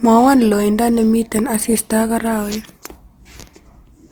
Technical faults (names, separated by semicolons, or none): Opus compression